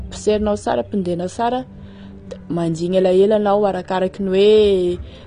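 Throughout the speech, nothing reaches above 9.7 kHz, leaving it dull, and sibilants carry a fizzy, smeared texture. This plainly audible damage is likely AAC compression, which fits AAC-LC at about 32 kbps: the encoder drops high bands and coarsely quantises the rest.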